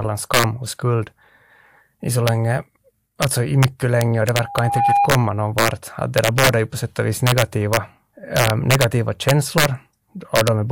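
From start to finish, this speech clip carries integer overflow. The signal is pushed about 4 dB past full scale. No limiter catches the loudest peaks, so their sample values wrap around to the opposite sign. A value near the top flips to near the bottom in a single step. Only a small fraction of samples are affected, so the damage comes in bursts. The loudest peaks bring violent, splintering cracks, far harsher than ordinary clipping.

At 4.42 s, just after "mycket länge och det", a loudspeaker feedback squeal starts. A microphone is picking up the speaker it feeds. At 808 Hz the loop gain goes above one, so that tone keeps reinforcing itself. It swells over a little under half a second into a piercing whistle. At its peak it sits a few decibels above the speech. It ends at 5.12 s.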